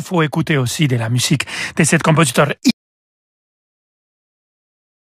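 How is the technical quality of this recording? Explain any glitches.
The recording has one fault: an audio dropout to silence that runs from 2.71 s to the end of the clip. Right after "musique de cet compositeur", the input signal was likely lost through a disconnected source, a broken link or an accidental mute, while the recorder kept writing silence. The speech stops abruptly mid-flow, and what follows is silence with no room tone. Everything said during those final seconds is missing.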